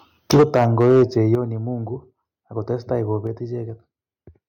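From 0.31 to 1.35 s the speech shows microphone overload: harsh, crackling peaks about 10 dB past full scale, with around 7 percent of samples clipped, likely because the input volume was set too high. The waveform shows flattened tops, and the spectrogram shows broadband smearing on the loudest syllables.

The microphone volume is stepped down at 0.34 s by about 4 dB, at 1.35 s by about 8 dB, and at 3.27 s by about 3 dB, likely the call software cutting the input gain. Each step is a sudden drop in level of both voice and background. On the waveform it appears as an abrupt narrowing of the envelope, and on the spectrogram the whole picture dims at once.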